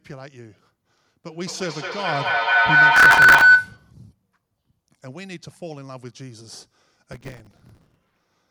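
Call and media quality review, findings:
Feedback howl, 1.32 to 3.95 s. Tone near 1.5 kHz, peaking about 18 dB above the speech. Pulses roughly every 200 ms. Probable component: two devices sharing a room on one call. Mic-to-speaker loop gains level each pass.

Processor overload crackle, 2.96 to 3.41 s, overlapping the howl's tail. Gritty tearing on the sound. Probable component: audio processing thread. Buffer deadlines missed in a row. Stale audio replayed with hard edges. Tick spacing fits buffers of a few milliseconds.

Processor overload crackle, 7.12 to 8.27 s. Same tearing, longer burst. Same component and mechanism. Many consecutive misses, each filled with repeated old audio.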